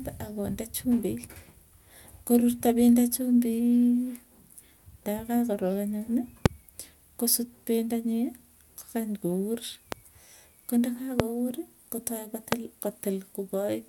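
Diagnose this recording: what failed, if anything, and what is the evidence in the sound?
Four loud pops sit on top of the speech, at 6.46–6.48 s, 9.92–9.95 s, 11.20–11.22 s and 12.52–12.55 s. Each is a single sharp click lasting about 20 ms and standing about 20 to 25 dB above the speech, which carries on underneath. The fault is likely in the analogue wiring, from a loose connector or static discharge injecting voltage steps. On a waveform they are tall spikes; on a spectrogram, thin vertical broadband lines.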